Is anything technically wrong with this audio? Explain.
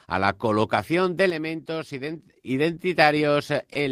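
Yes, there are two problems in this speech clip.

From 1.30 to 2.30 s the level suddenly drops by about 6 dB and then comes back. That's most likely one channel dropping out. With one side gone, the mono sum loses half of everything common to both channels.

Around 3.73 to 3.83 s there's a short stall from a late packet. A packet showed up late, the jitter buffer ran dry, and the receiver held the last sound for about 20 ms until it arrived. Nothing's missing, but that moment drags slightly.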